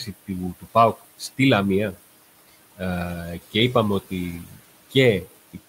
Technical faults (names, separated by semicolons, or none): noise suppressor artifacts